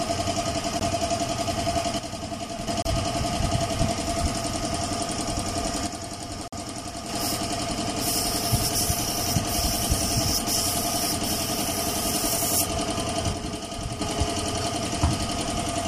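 At 0.80 s the sound cuts out for about 40 ms and then resumes further along, as though it had kept playing through the gap. This is most likely a Bluetooth dropout: packets missed their delivery deadline to the headphones and were discarded, leaving silence until valid data arrived. The length fits roughly one lost packet. The same hole recurs at 2.82 s (about 40 ms, fitting two lost packets) and at 6.48 s (about 55 ms, fitting three).

From 1.99 to 2.67 s the level drops abruptly by about 6 dB. One channel drops out here, probably due to a lost stereo channel. With one side gone, the mono sum keeps only half of the shared content, which accounts for the 6 dB fall. The same drop occurs from 5.87 to 7.09 s, overlapping the 6.48 s dropout, and again from 13.33 to 14.01 s.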